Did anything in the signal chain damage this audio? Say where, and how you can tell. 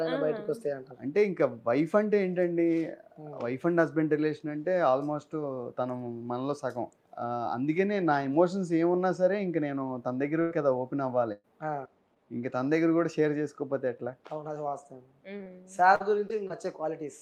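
Yes. Burst of packet loss on the network, at 10.41 to 10.52 s and 11.32 to 11.53 s: the last sound is stretched and fades, covering about 100 and 120 ms of missing audio.

Short concealed packet loss, also network, at 12.14, 15.38, 15.44, 15.95, 16.28 and 16.48 s: brief smears where the receiver extended the previous sound across 20 to 40 ms gaps.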